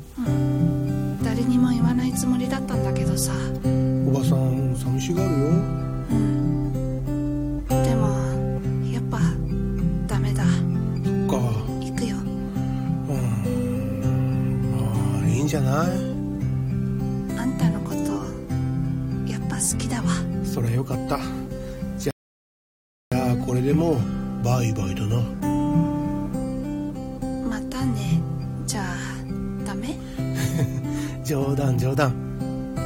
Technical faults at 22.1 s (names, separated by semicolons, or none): rebuffering stall